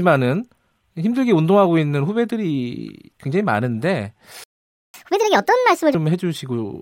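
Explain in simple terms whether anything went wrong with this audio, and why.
A playback stall at 4.44 s silences the speech for about half a second until 4.94 s, likely because the player ran out of data or was blocked. Catch-up at higher speed follows from 4.94 to 5.95 s: the player races through its backlog at 1.5 times normal speed, so the voice sounds hurried and about seven semitones higher, then returns to normal.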